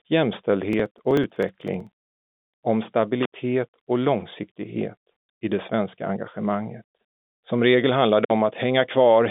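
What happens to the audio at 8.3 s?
A loose connection opens briefly from 8.23 to 8.31 s, an intermittent contact: the speech drops out for about 54 ms, with crackle at each edge.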